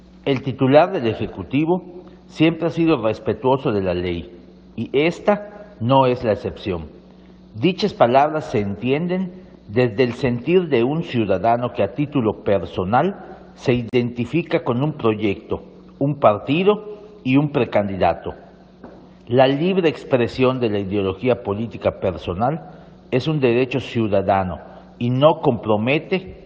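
At 13.89 s a gap at a join of encoded pieces drops about 37 ms of silence into continuous sound, untrimmed encoder padding, showing as a blank vertical strip with smeared edges.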